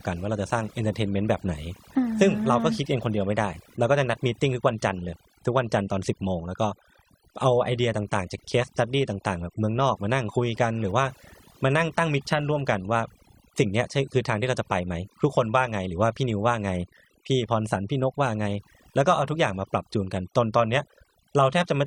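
Overdone noise removal runs throughout the speech: a noise reducer set too aggressively pulls individual frequency bands down whenever they sit near its noise estimate. Quiet speech detail goes with the noise, leaving near-silent gaps with twinkling specks.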